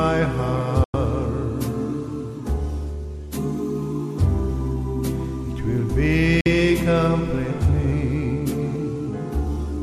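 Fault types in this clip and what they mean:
Digital broadcast dropout, at 0.84 to 0.94 s and 6.41 to 6.46 s: the receiver stopped getting valid frames and muted, so the sound fades out within 3 ms, leaving silent holes of 96 ms and 48 ms, which fits a few lost frames, before resuming later.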